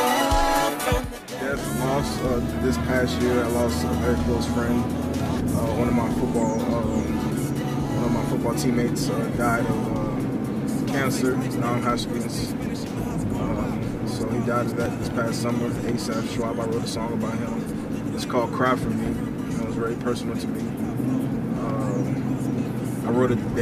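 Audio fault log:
8.88 s and 14.86 s: overlap between stream segments. Two tiny skips. They land about 6 s apart, which fits stream segments of 6 s each. At each joint, the time stamps of neighbouring segments overlap. The player trims the overlap, but that sound was never actually duplicated. About 6 ms of audio is lost at 8.88 s and 11 ms at 14.86 s. The waveform jumps across each gap.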